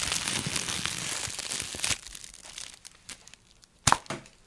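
Listening closely to these everyday sounds, nothing stood out as a technical fault at any point.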